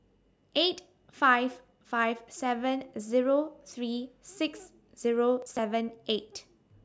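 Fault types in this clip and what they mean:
Processor overload crackle: a rapid run of missed buffer deadlines, each skipped, tears the sound grittily from 5.42 to 5.59 s, rather than leaving one clean dropout.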